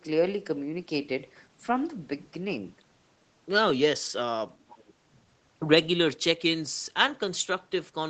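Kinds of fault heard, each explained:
Echo leak: Between 4.68 and 4.93 s, a faint, delayed copy of the speech returns about 441 ms behind the original, far quieter than the main voice. The likely cause is a far-end loudspeaker whose echo canceller let some of its microphone pickup slip back into the call. Room reverberation smears sound continuously right after it. This copy arrives as a distinct repeat after a clear gap, briefly and within the call's 8 kHz band.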